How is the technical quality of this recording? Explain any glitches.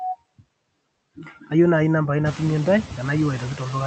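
The recording is processed. Noise suppressor artifacts run the whole way through. The suppressor cuts what it judges to be steady noise by about 20 dB, band by band in each frame, so the background drops away between phrases and swells back under the speech. Unlike a noise gate, which mutes everything at once, the suppression acts per frequency band. The effect is clearest after the room noise rises by about 12 dB at around 2.5 s. The audio is band-limited at 8 kHz, consistent with an Opus call path at about 32 kbps.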